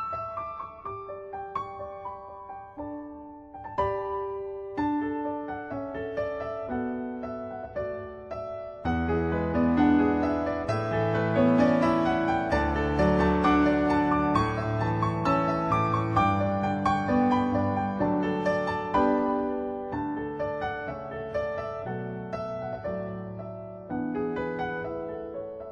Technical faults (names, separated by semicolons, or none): none